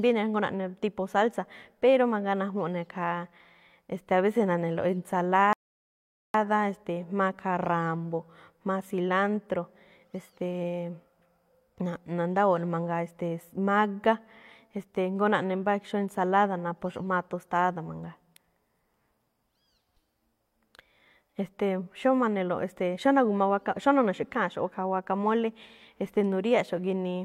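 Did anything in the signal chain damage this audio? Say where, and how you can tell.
Yes, at the playback stage: a rebuffering stall. The player's buffer ran dry and playback halted from 5.53 to 6.34 s while more data arrived over the network. The speech drops to silence, then resumes exactly where it stopped, adding 0.81 s without losing any audio.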